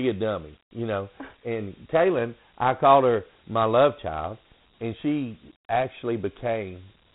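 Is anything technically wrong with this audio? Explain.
Yes. Dialogic VOX ADPCM coding runs throughout the speech. The codec stores each sample as a 4-bit step relative to a running prediction rather than as a full value, and the rate here fits about 32 kbps, 4-bit samples at 8,000 a second. Nothing survives above 3.9 kHz, so the speech sounds narrow and telephone-like. The coarse step sizes are plainly audible as a gritty hiss that tracks the speech.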